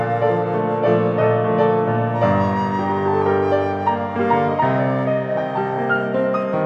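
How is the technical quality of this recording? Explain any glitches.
No glitches can be heard anywhere in the recording. The audio runs without any dropout, click, distortion or other interruption to point out.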